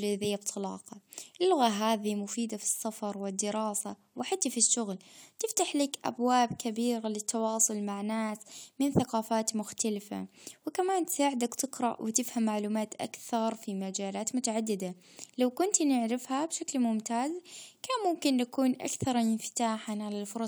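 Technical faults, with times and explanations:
No technical faults are present, so there are no times or explanations to give.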